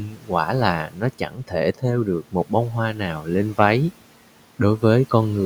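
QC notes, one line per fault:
0.00–0.32 s, 0.84–1.03 s, 1.19–1.53 s, 2.23–2.52 s (just before "bông hoa") and 3.19–3.29 s (just after "bông hoa"): speech cut by the noise suppressor. Parts of the speech sound swallowed, dropping by about 10 to 13 dB, because the suppressor mistook them for the room noise (about 22 dB below the speech) and turned them down with it.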